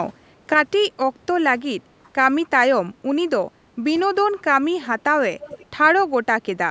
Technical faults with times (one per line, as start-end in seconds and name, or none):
0.54-6.70 sudden gain jump
1.99-2.11 background gated by the echo canceller
4.82-5.01 echo leak
5.40-5.66 echo leak